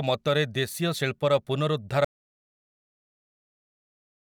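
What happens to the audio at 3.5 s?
At 3.5 s the speech is inside an audio dropout to silence that begins at 2.05 s and runs to the end of the clip. The input signal was likely lost, through a disconnected device, a broken link or an accidental mute, while recording carried on storing silence. The speech stops abruptly and the rest is total silence, with no room tone or background noise, so anything said after that point is missing.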